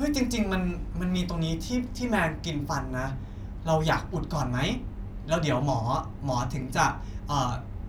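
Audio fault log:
1.17 to 6.62 s, clock drift buffer slips: the sending and receiving devices likely run on separate clocks that disagree by a few hundred parts per million, so the buffer between them drifts until it drops or repeats a small block of around fifteen samples. That happens about five times, every 1.36 s, and each slip breaks the waveform abruptly, giving a short, evenly spaced click over the speech.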